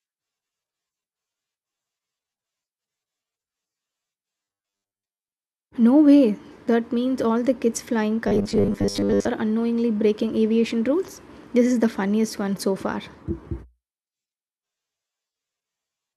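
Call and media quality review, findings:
Rigid metallic buzz at 100 Hz over the speech, 4.43–5.38 s and 8.28–9.28 s (between "all the kids flying" and "unknowingly breaking aviation rules"). Robotic sound from repeated short buffers, likely input starvation with concealment looping a 10 ms chunk, repeated over most of the first span and about half the second.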